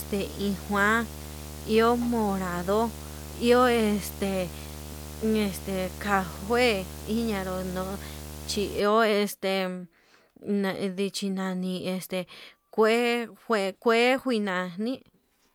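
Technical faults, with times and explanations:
0.0–8.80 s, video or display buzz: a 75 Hz buzz with hash above it sits roughly 15 dB below the speech, then stops. A display or video cable is coupling its field-rate signal into the audio path, so the picture's refresh appears as a harmonically rich buzz.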